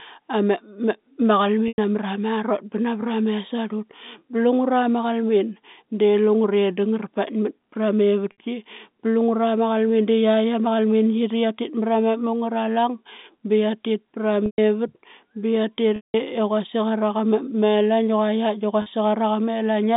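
Speech over a telephone-band line, heard with packet loss with pitch repetition at 1.68 s, 8.32 s, 14.46 s, 15.96 s and 18.82 s. The gaps last 100, 60, 120, 180 and 40 ms. The first comes just before "namra marot ba navra". The third follows "ba qia tit pra". Each time the receiver repeats the last pitch period, so the sound briefly buzzes and holds, then fades, worst in the 180 ms gap.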